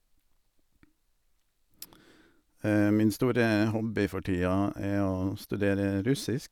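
No technical faults can be heard anywhere in the clip. The speech runs without any dropout, glitch, distortion or other disturbance to its sound.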